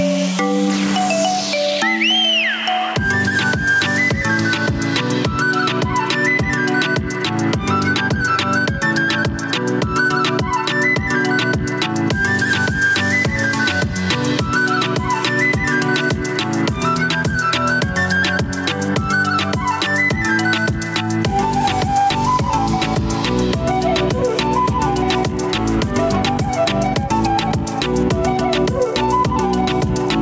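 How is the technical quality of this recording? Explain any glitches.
Gain pumping runs through the whole recording, with the level swinging by around 10 dB. Loud and soft parts sit closer in level, so the dynamics sound squashed. The likely cause is input gain set far too high, with a fast limiter clamping down on each peak. On a waveform the envelope looks flattened and the quiet stretches rise. A spectrogram shows the noise floor brightening between events. The call's microphone processing band-limits the audio, leaving nothing above 8 kHz.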